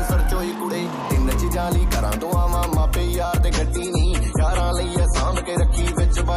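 At 3.51 s the adaptive stream drops to a lower bitrate, fitting a 32 kbit/s version, and everything above 11.5 kHz abruptly vanishes, without a gap.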